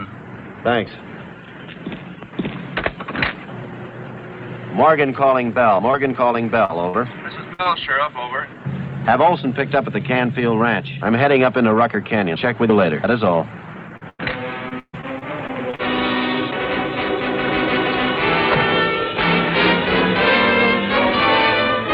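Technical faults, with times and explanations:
5.91 s, 6.65 s, 6.89 s, 7.63 s and 13.97 s: short concealed packet loss. Each time, about 20 to 40 ms never arrived and was patched by extending the preceding sound. It is heard as a brief smear or wobble. A spectrogram shows a short stretch of flattened, smeared spectrum that blends back.
7.53–7.61 s and 14.09–14.21 s: burst of packet loss. About 60 ms and then 100 ms went missing. The receiver stretched the last sound and faded it, giving a held buzz or fading hiss before the audio resumes further on. The waveform envelope tapers, and the spectrogram shows frozen, decaying bands.
14.69–15.81 s: repeated packet loss (robotic sound). Seven gaps fall in just over a second, the longest about 140 ms, and roughly a quarter of the span is concealed. The sound turns choppy, with pieces missing. The spectrogram shows a row of frozen, smeared patches interrupting the normal texture.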